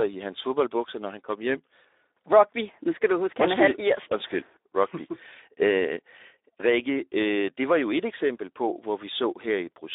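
From start to finish the speech sounds hoarse and grainy, with a thin, boxed-in tone confined to roughly 300 Hz to 3.7 kHz, like an old phone line. This is Speex codec damage, plainly audible throughout. Speex rebuilds speech from a predicted vocal-tract filter plus a coded excitation signal. Here the excitation gets too few bits, which fits a rate near 11 kbps, so the roughness and noisy texture are baked into every syllable.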